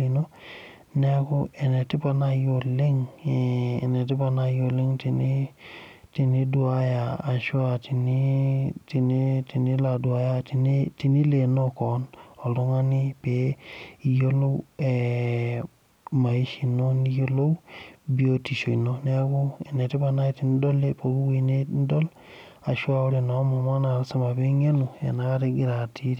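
No technical faults occur at any point in the speech, so there is nothing to describe in time order.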